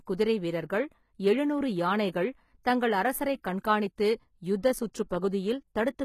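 Throughout the speech there is plainly audible damage of the kind HE-AAC compression leaves, likely from encoding at a very low bitrate, in the region of 20 kbps. The core codec covers only the lower spectrum, and the treble is synthesised by copying lower bands upward, so sibilants sound gritty and metallic, with nothing above about 14.9 kHz. Plain low-pass filtering would sound dull, not falsely bright, and that bright but wrong treble is what marks band replication.

At 5.09 s there is a pre-echo. A brief hiss, about 14 ms long, runs just ahead of a sharp onset, and the attack itself is softened. The transform block spread its quantisation noise evenly, so noise meant to hide under the loud attack leaked into the quiet moment before it. A click would be a single instant, but this is a smeared noise spread over the moment before the onset it precedes.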